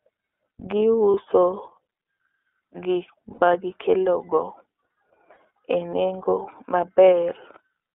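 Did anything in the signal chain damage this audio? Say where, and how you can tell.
Yes. At the codec stage, the whole speech clip passed through the iLBC codec, likely at its 13.33 kbps mode. The band runs only from 300 Hz to 3.5 kHz, and the frame-by-frame excitation coding leaves the speech plainly rough and slightly synthetic throughout.

On the network side, packets went missing, producing lost iLBC frames at 1.11 s, from 3.33 to 3.43 s, and at 5.34 s. The 30, 90 and 30 ms gaps fit one, three and one 30 ms frame. The decoder repeats the last pitch cycle with noise, giving a short buzzy, held vowel that clears almost at once.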